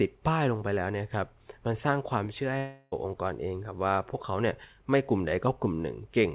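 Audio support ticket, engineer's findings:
Long network dropout, 2.58 to 2.94 s. About 340 ms of speech lost. The gap is filled with a fading buzz carried over from the last sound. No dead silence. Likely cause: packets lost on the network leg, with jitter buffer concealment extending the last received audio until packets resumed. Speech picks up after the gap without the lost portion. Narrowband G.711 mu-law path audible throughout, nothing above 4 kHz.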